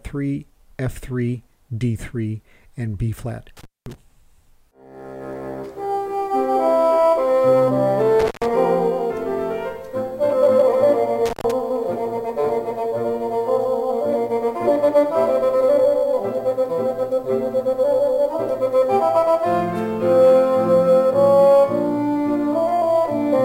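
The sound cuts out abruptly, with crackle at each edge, at 3.57–3.95 s, 8.20–8.50 s and 11.26–11.51 s, going quiet for 210, 134 and 113 ms. This is an intermittent contact: a loose cable or plug briefly opening the line, leaving faint hiss.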